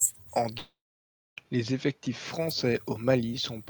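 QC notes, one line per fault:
0.57–1.39 s, long network dropout: the speech cuts out for roughly 0.8 s. Right at the break the last sound gets stretched into a buzzy, hissy tail that fades over a fraction of a second, then it's near-silence for about 630 ms. When the talker comes back, that stretch is just gone, not delayed. This is likely a burst of lost packets, with the receiver smearing the last good audio to cover the gap before giving up.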